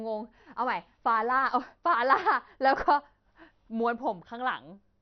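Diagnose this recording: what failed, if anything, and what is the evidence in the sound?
The failure sits at the codec stage, with MP2 compression the likely cause, running throughout the speech. Nothing is heard above about 6.1 kHz, and the remaining bands carry a heavy gurgling, granular roughness as upper sub-bands drop in and out. This points to a starved bit budget, around 48 kbps. A simple low-pass filter would dull the sound just as much but stay clean; here the coarse quantisation gives the graininess away.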